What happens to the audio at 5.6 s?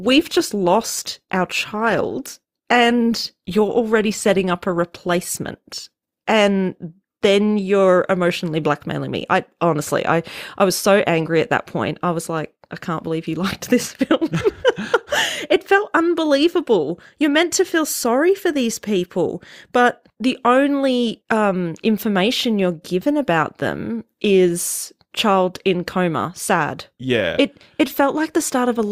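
At 5.6 s the player is still on the low-bitrate rendition of an adaptive stream, chosen for a fast start, and this lasts from 0 to 6.0 s. The speech sounds dull, with thin or synthetic treble and stronger codec artefacts, fitting roughly 24 kbit/s Opus. At 6.0 s quality jumps without a gap.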